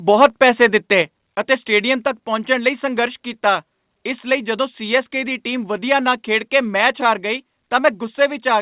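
At 1.02 s the speech suddenly drops by about 4 dB, just before "ਅਤੇ ਸਟੇਡੀਅਮ". At 7.20 s it drops again, by about 2 dB. Voice and background fall together, in one step each time. This is likely a microphone volume stepped down by the call software, which judged the input too hot and cut the device gain. The narrowband call path, with nothing above 4 kHz, carries both drops unchanged.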